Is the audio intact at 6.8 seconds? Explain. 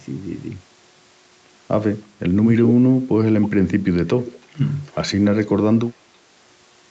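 Yes, at 6.8 seconds the speech is intact, with no dropout, glitch or other fault at that moment.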